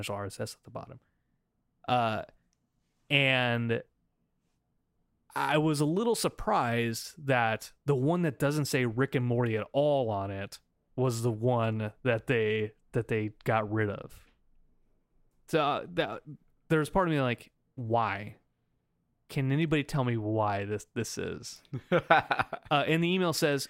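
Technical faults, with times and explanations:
No technical faults heard.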